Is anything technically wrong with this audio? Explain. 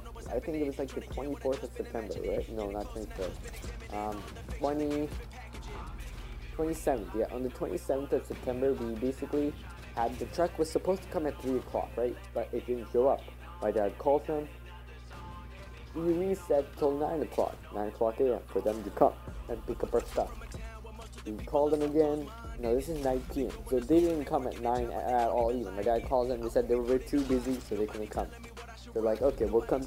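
Yes. A steady low tone runs through the whole clip, a constant drone sitting under the sound at roughly 15 dB below it, which makes it clearly audible rather than faint. This is mains hum at 60 Hz, with some low harmonics around it. Power-line current is leaking into the signal path, likely through a ground loop between connected equipment or from a transformer close to the cabling, so the supply frequency gets recorded along with the wanted audio.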